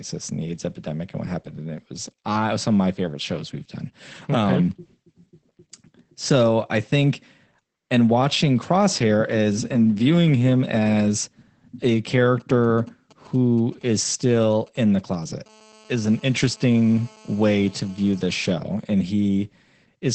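Speech runs through the whole clip under Opus voice compression, with plainly audible codec damage. Nothing is present above about 8.6 kHz, so the sound is muffled, and the voice has a hoarse, slightly robotic edge from the coarsely coded excitation. That points to the SILK linear-prediction mode at a wideband setting and a low bitrate of around 12 kbps, working in 20 ms frames. This differs from a plain low-pass filter because the damage also reaches the texture of the voice, not only its top end. Starting at 12.40 s, just after "viewing him as a", GSM signalling bursts break in until 15.47 s. They sit roughly 30 dB below the speech and form a galloping dit-dit-dit of short buzzes at 217 Hz. A nearby 2G phone is exchanging brief groups of radio bursts with the network, and the audio circuitry rectifies them. At 15.47 s the pattern turns into continuous GSM phone buzz, which lasts until 18.49 s at about 28 dB below the speech. 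This is a hard, raspy 217 Hz tone rich in harmonics, the sound of the phone transmitting steadily during a call. Mains hum at 50 or 60 Hz is smoother and lower, and it stays steady rather than switching from stuttering bursts to a solid buzz.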